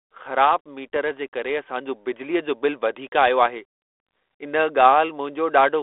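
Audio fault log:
0.94–0.97 s, packet loss on an ADPCM call: roughly one packet, about 20 ms of audio, failed to arrive and was filled with silence, leaving a hard-edged gap. The decoder's adaptive predictor and step size then no longer match the sender's, so the sound returns slightly distorted before settling.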